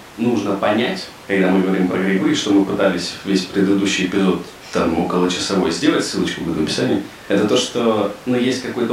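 Nothing in this recording of speech stands out as a technical fault, so there's no problem to point to at any moment along the way.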